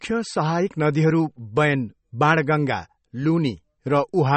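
Throughout the speech, the treble stops dead at 8.3 kHz and the remaining sound has a watery, swirling quality, with smeared attacks and metallic chirps on s sounds. This points to MP3 compression at a low bitrate, likely near 32 kbps. Simple low-pass filtering would cut the top without that flickering swirl.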